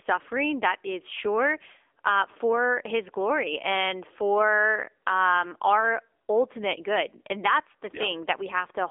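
Speech heard through an AMR narrowband mobile codec for the whole clip: nothing passes above about 3.6 kHz, lows are thin below 300 Hz, and the voice has a plainly buzzy, synthetic edge, which fits a low AMR-NB mode near 8 kbps. That modelled buzz, beyond mere band-limiting, distinguishes it from a plain telephone filter.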